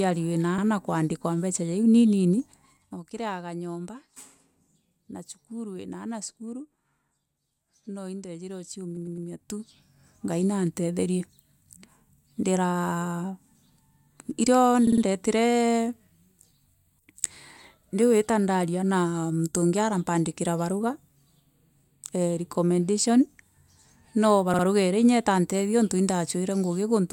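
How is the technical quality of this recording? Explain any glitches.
The recording has two kinds of glitch: stutters from repeated frames and ticking from stepped level changes.

Repeated frames occur at 0.58 s, 8.96 s, 14.87 s and 24.53 s. A short stretch of encoded audio is played again, so each repeat sounds like a stutter. At 0.58 s, just before "kuandikwa mbeca ja iu", a 52 ms block plays once more. After "no indejire" at 8.96 s, a 104 ms block plays three extra times. At 14.87 s a 52 ms block repeats three more times, and at 24.53 s twice more. The 52 ms length fits two compressed frames of about 26 ms each.

Zipper noise runs from 2.30 to 3.09 s and from 8.68 to 10.17 s. The level moves in 1 dB jumps with no smoothing between them, so each jump adds a small click. The first stretch drops about 15 dB with roughly fifteen ticks per second. The second stretch, between "no indejire" and "ngai nantetherie", rises about 15 dB at around ten ticks per second.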